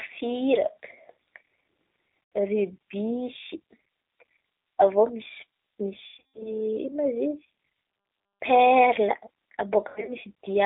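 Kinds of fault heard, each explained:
G.729 codec: The whole clip carries the sound of a low-rate CELP speech codec, consistent with G.729 at 8 kbit/s. Each short frame is rebuilt from a vocal tract filter, a pitch predictor and a few coded pulses. The band is held to about 300 Hz to 3.7 kHz, so the speech sounds thin and muffled, and the coding roughness is plainly audible as a slightly synthetic, grainy texture.
VoIP packet loss concealed by the speech codec: Three dropouts are bridged by the decoder. It extends its last pitch and filter state and lets the level sag, so the speech turns briefly buzzy and smeared instead of going silent. The first is a single 80 ms gap at 2.24 to 2.32 s. The second runs from 6.06 to 6.53 s, with about 260 ms missing in a cluster that includes a 140 ms run. The third spans 9.88 to 10.15 s, with about 140 ms lost. Recovery after each gap is sluggish.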